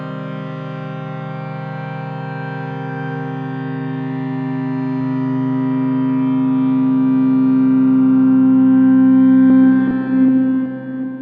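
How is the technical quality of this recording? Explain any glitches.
No dropouts, clicks, distortion or timing glitches turn up anywhere in the recording, so there is nothing to explain.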